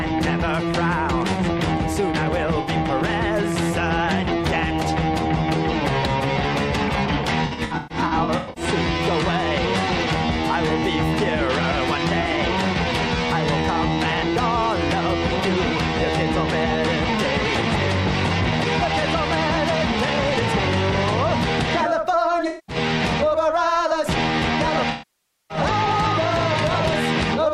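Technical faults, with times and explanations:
2.61 to 2.69 s: AAC frame loss with concealment. About 64 ms is rebuilt from the last good spectrum, giving a brief smeared, noisy patch consistent with three lost frames.
7.45 to 8.64 s: AAC frame loss with concealment. About 680 ms of losses are scattered over 1.1 s, the longest run roughly 150 ms, so the sound repeatedly smears and thins.
12.21 to 12.36 s: AAC frame loss with concealment. About 85 ms of short gaps spread over 170 ms, each around 20 ms, leave a phasey, flickering texture where concealment patches in.
22.47 to 22.76 s: AAC frame loss with concealment. About 213 ms is lost in one run, filled in from the repeated last good spectrum.
24.90 to 25.57 s: AAC frame loss with concealment. About 600 ms of continuous loss outlasts concealment, so the sound fades toward silence and then fades back in.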